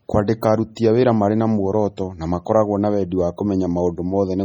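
Throughout, the speech sounds watery and swirling, with metallic chirps on s sounds and softened attacks, and nothing above 19.6 kHz. The likely cause is heavy MP3 compression, which fits a 32 kbps bitrate, where weak frequency lines flicker on and off between frames.

At 0.75 s, just before "a wĩra marĩ", a hiss of about 15 ms leads into a smeared onset. This is pre-echo: the codec spread quantisation noise across its whole block, filling the quiet moment ahead of the sharp attack.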